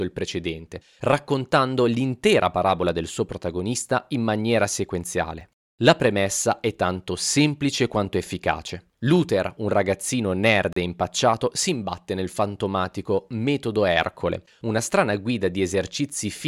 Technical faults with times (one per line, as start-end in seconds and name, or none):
5.41 block of digital silence
10.73-10.76 block of digital silence